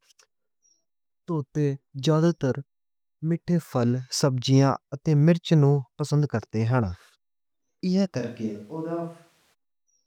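At 8.21 s the speech turns suddenly roomy and hollow, about 5 dB quieter, until 9.52 s. Likely a switch to a distant microphone.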